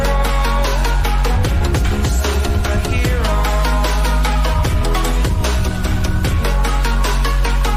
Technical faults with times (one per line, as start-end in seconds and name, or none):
none